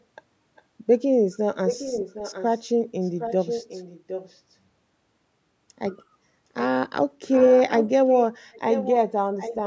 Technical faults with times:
0.56-0.62 echo leak
1.67-2.59 echo leak
3.02-4.40 echo leak
7.32-8.15 echo leak
8.52-8.94 echo leak
9.37-9.67 echo leak

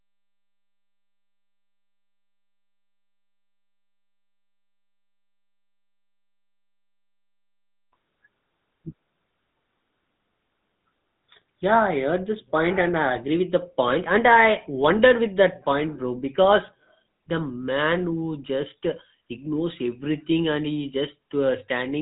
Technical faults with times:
0.00-22.02 GSM full-rate codec

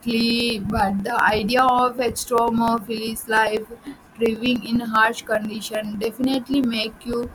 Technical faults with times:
0.11-7.23 periodic USB or driver dropouts

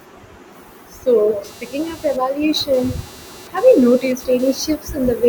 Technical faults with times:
1.44-4.60 computer activity noise

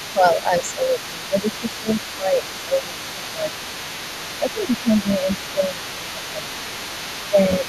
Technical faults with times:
0.00-7.68 other side's voice leaking through
0.13-3.68 speech suppressed in double talk
4.38-6.73 speech suppressed in double talk
7.30-7.68 speech suppressed in double talk

